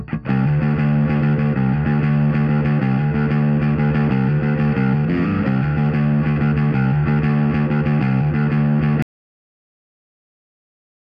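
At 6.31 s there is a short concealed packet loss. About 40 ms of audio arrived too late, and the receiver extended the preceding sound to fill it. It comes across as a brief smear. From 9.02 s to the end there is an audio dropout to silence. The signal stops abruptly into silence with no room tone, which likely points to a lost input or a disconnected device.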